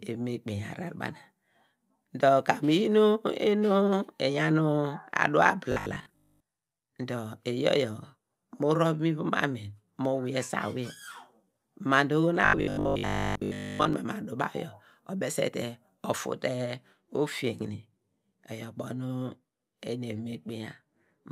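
Robotic sound from repeated short buffers at 5.72 to 6.42 s and 12.41 to 13.93 s: a rigid 50 Hz metallic buzz, likely from a 20 ms segment repeating while most real audio is skipped.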